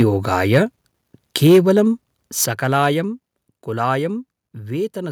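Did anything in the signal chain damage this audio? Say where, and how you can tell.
Yes. Microphone overload occurs at 0.00–0.03 s, 0.32–0.58 s and 1.46–1.80 s. The loudest peaks have flattened tops and a harsh crackle, overshooting full scale by about 2, 2 and 4 dB, with a few percent of samples clipped. The likely cause is input gain set too high for the converter.

Microphone volume stepped down at 1.47 s and 2.46 s. Speech and background drop together, first by about 2 dB inside the worst clipped peak, then by about 7 dB. This likely points to call processing cutting the device's input gain in single steps.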